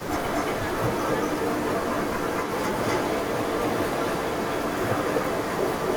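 Throughout the speech, a delayed copy trails the talker by about 239 ms at roughly the same level. This echo leak likely comes from a far-end loudspeaker whose echo canceller let the pickup through. Unlike room reverberation, it is one distinct repeat, not a smooth decay.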